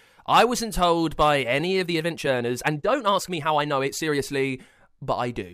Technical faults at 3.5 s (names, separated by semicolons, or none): time-stretched section